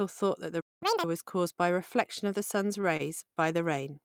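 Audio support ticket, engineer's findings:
Player likely starved of data or its thread blocked; output dropped out 0.60 to 0.83 s, about 0.21 s of dead silence mid-phrase, following "thought that the". Playback stall.

Player resampling backlog to recover lost time; 0.83 to 1.04 s runs at double speed, pitch up about ten semitones, chipmunk effect, before "was caused by reflection". Catch-up at higher speed.

Jitter buffer ran dry on late packets; receiver stretched last sound, nothing lost, after "reflection of the sun’s". 15 ms hold at 2.81 to 2.85 s, 26 ms at 2.97 to 3.01 s, brief smeared sustain. Short stall from a late packet.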